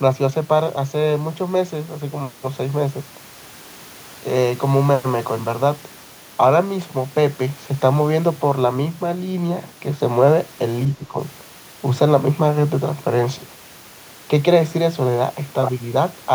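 Speech suppressed in double talk affects this speech recording from 10.88 to 11.18 s, where the talker's level sinks by about 10 dB for roughly a third of a second before recovering. The likely cause is an echo canceller facing both ends talking at once: unable to tell the near talker apart from the far-end sound returning through the loudspeaker, it treated the whole mix as echo and attenuated it, briefly pulling the wanted speech down with it.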